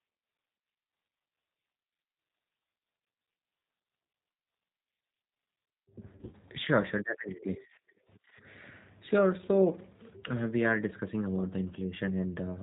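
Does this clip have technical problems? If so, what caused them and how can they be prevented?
Yes. The whole recording passed through a G.729 codec, consistent with the 8 kbit/s G.729A variant. The coder discards everything above 4 kHz and rebuilds each 10 ms frame from a vocal tract filter, a pitch predictor and a few pulses, so the speech comes out narrowband, dull and plainly rough and synthetic. Prevention: carry the call on a wideband codec such as G.722 or Opus at a generous bitrate.

Between 6.17 and 6.35 s there is VoIP packet loss concealed by the speech codec. About 80 ms of audio went missing, scattered across roughly 160 ms in short gaps of no more than 20 ms each. For each gap the decoder guessed, repeating its last pitch and filter at falling gain, so the speech briefly turns into a stretched buzz or coloured noise that fades. It stays weak or distorted for a moment after real packets resume, because each rebuilt frame depends on the one before. 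Prevention: reduce network congestion, prioritise voice traffic with QoS, and use a jitter buffer with forward error correction.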